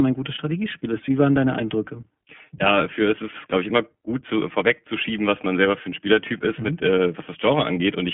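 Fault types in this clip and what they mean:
iLBC codec: narrowband VoIP coding, each 20 ms frame handled independently; nothing above 3.8 kHz, and the speech sounds plainly rough and a bit synthetic.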